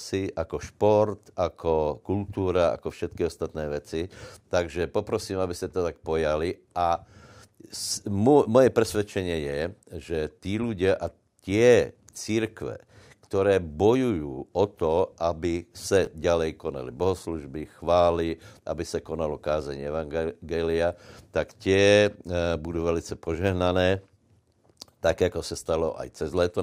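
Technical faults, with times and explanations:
16.05–16.07 s, chunks out of order: a 10 ms chunk was written one chunk late, swapping two segments just after "o to aby sa", so the hard joins give a brief jumble.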